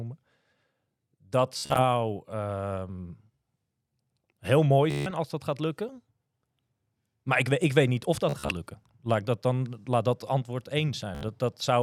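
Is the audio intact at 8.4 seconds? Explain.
No. From 8.29 to 8.54 s the speech breaks into a Bluetooth stutter: packets arrived late or not at all, and the receiver filled each gap by replaying its last short slice of audio. About 126 ms is lost, scattered across roughly 196 ms, with the longest gap about 42 ms. The result is a brief machine-gun buzz. Unlike a plain dropout, the gaps are filled with repeated fragments rather than silence, and the speech then resumes further on, as if it had kept playing.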